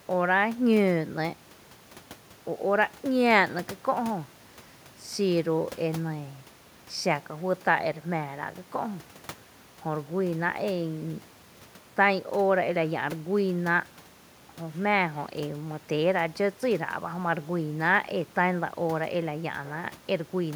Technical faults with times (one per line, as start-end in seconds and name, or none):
none